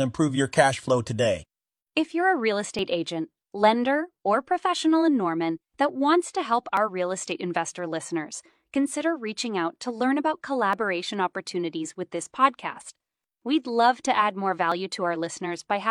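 Overlap between stream segments causes small skips at 2.79, 6.77, 8.76, 10.73 and 14.72 s. Adjacent segments, apparently about 2 s long, carried overlapping timestamps, so the player discarded audio that was never duplicated: roughly 26 to 36 ms each time. The waveform jumps and a click or tiny skip results, for example between "you're a real" and "agent lender or professional", and between "out to learn about" and "opportunities with this podcast", recurring on that 2 s grid.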